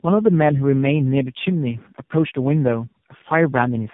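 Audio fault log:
Throughout: tandem speech coding. The speech has passed through three speech coders in a row, AMR-NB at 7.4 kbit/s at both ends with a G.726 32 kbit/s stretch in the middle, each one re-encoding the already mangled output of the one before. The damage stacks up, so the speech comes out rough, warbly and muffled, with nothing above 3.7 kHz. It's worse than you'd get from a single AMR-NB hop.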